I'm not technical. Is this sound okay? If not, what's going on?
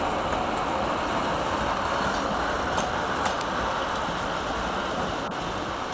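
Yes, it's fine: it sounds like it came through an ordinary internet call, which naturally trims off the very highest sounds above about 8 kHz, and nothing in it points to a problem.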